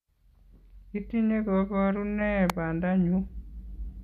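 At 2.50 s a single sharp snap cuts across the speech, an electrical switching spike. It likely comes from a nearby switch, motor or static discharge arcing briefly and coupling into the audio line, adding a click on top of the sound rather than replacing it. It reaches about −10 dBFS. On a waveform it is a needle-thin vertical stroke, and on a spectrogram a narrow vertical line spanning the full frequency range.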